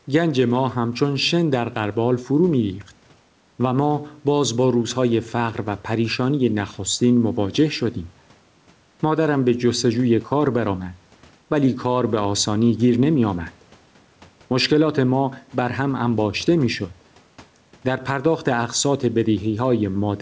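Gain pumping runs through the whole clip. The swing is around 5 dB. Loud and quiet passages sit closer together than they should, so the speech sounds flattened. The likely cause is input gain set far too high, with a fast limiter pulling it back down on each peak. The call codec's band limit at 8 kHz stays steady underneath.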